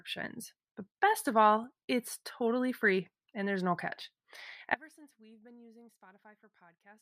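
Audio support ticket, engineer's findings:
Audio dropout to a faint residue, 4.75 s to end: speech collapses abruptly to faint leak roughly 25 dB down. Waveform drops to thin trace; spectrogram fades to dim ghost. Likely signal path interrupted, downstream stage still live.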